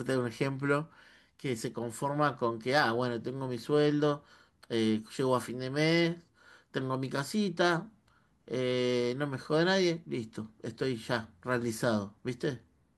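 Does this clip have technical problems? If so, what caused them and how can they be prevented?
Yes. At 7.18 s there is a brief error peaking at about -35 dBFS, caused by a corrupt FLAC frame. Flipped bits derailed the decoder's prediction from the damaged bit on, consistent with one damaged frame. Enabling CRC checks on decode and verifying files after transfer prevents this.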